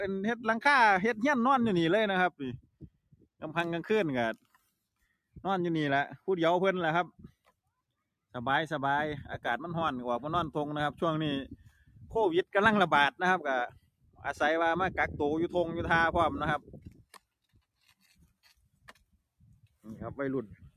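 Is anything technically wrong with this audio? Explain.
Yes. A noise suppressor applied to music or sounds runs through the whole clip. Tuned for speech, it treats sustained tones, ambience and reverb as noise and turns them down, while transients pass. The gain applied to the material swings by around 10 dB as the suppressor changes its estimate, so the sound pumps and thins. Held parts sag, and the tails after attacks collapse sooner than they naturally would.

There are seven places where sound is cut by the noise suppressor, pulled well below the surrounding level: 2.57–3.43 s (about 22 dB), 4.36–4.74 s (about 19 dB), 7.11–7.7 s (about 21 dB), 11.59–12.15 s (about 17 dB), 13.69–14.25 s (about 22 dB), 16.59–17.26 s (about 21 dB) and 17.49–19.85 s (about 22 dB). Each lasts from a fraction of a second to well over a second. The steady or decaying material there is classed as noise and sinks in level, audible as dropouts or truncated decays.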